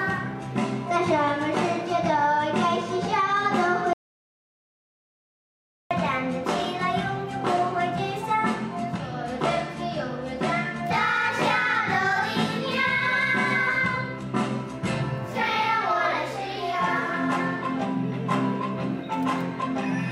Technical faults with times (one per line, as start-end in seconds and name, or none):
3.93-5.91 audio dropout to silence